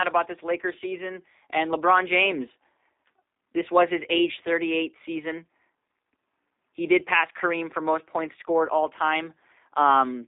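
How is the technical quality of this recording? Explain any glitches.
The technical quality is limited by narrowband telephone-style coding that runs for the whole clip. The damage is plainly audible.

The G.729 codec affects the speech from start to finish. Nothing above 3.7 kHz survives, and the low end thins out below about 250 Hz. The codec does not store the waveform. It rebuilds each short frame from a vocal tract filter, a pitch predictor and a few pulses per subframe, which fits an 8 kbit/s rate. That produces a rough, slightly synthetic buzz on voiced sounds. Simple band-limiting alone would sound muffled but clean. This roughness is what marks it as the codec rather than a filter.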